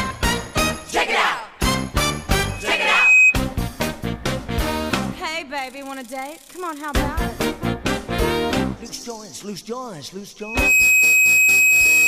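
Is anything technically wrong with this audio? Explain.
Yes. From 2.49 to 3.36 s, and again from 10.41 s to the end, a piercing 2.5 kHz tone swells to about 10 dB above the audio. This is loudspeaker feedback squeal: the microphone re-amplifies its own loudspeaker until that one frequency runs away, rising faster in the second event.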